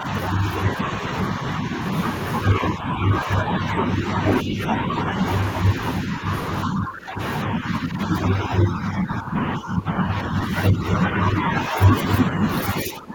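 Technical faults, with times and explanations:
0.00–1.78, 2.51–5.17, 5.75–6.29, 6.65–12.46 and 12.82 s to the end: speech suppressed in double talk. The speech keeps sinking and thinning in patches, only a few decibels at first, then deeper dips of about 10 dB through the long middle stretch and close to 20 dB right at the end. That pattern is likely an echo canceller hearing both sides at once, mistaking this talker for loudspeaker echo and pulling the level down along with it.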